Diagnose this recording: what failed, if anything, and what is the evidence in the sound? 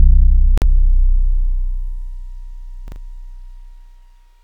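Digital broadcast dropout at 0.58 to 0.64 s: the audio mutes for about 43 ms, which fits a single frame failing its checksum at the receiver. The decoder silences output until valid frames resume, so the sound sent during the gap is lost.

Chunks out of order at 2.88 to 2.96 s: a 40 ms block of audio plays one chunk later than it should, giving a brief jumbled moment with hard joins. This points to the buffer or network stage writing that chunk late. Nothing is lost, only misplaced.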